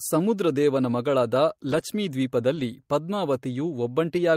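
Speech, with two spots of lost packets rebuilt from error correction: 1.67–1.81 s, right after "ಸಮುದ್ರದೇವನ ಮಗಳಾದ", and 2.55–2.61 s. Unlike a dropout or plain concealment, nothing goes silent or smears; the audio just turns briefly rougher and noisier, as low-bitrate backup copies fill the lost frames.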